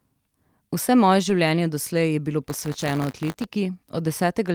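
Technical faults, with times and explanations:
1.3 s, lost packet rebuilt from error correction: one 20 ms packet replayed from its low-bitrate copy, briefly rougher and noisier; spectrogram shows a short grainy patch, no gap.
2.49 to 3.44 s, buffer tearing: writer and reader cross each period, splicing in a small slice of audio about 20 ms old, giving a 100 Hz robotic buzz; waveform shows regular hard joins, spectrogram vertical striations.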